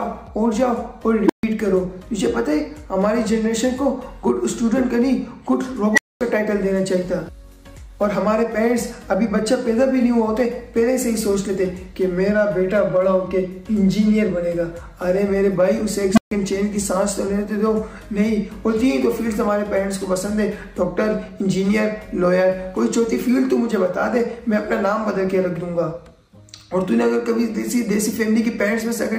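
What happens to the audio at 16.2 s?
At 16.13 s an unstable filter takes over: a recursive stage with bad coefficients feeds back on itself, so a low tone of roughly 200 Hz swells in about 46 ms, clips, then overflows and drops to silence for about 139 ms, until 16.31 s.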